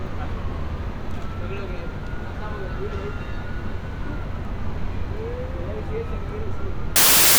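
A sound recording whose last moments, from 6.96 s to the end at 7.39 s, turn into loud, harsh broadband noise: samples built from the wrong bytes, where misassembled bytes push fast-changing low bits into each value's large part.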